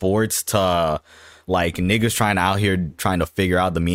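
No technical faults can be heard in the speech at any point, so there is nothing to place in time order.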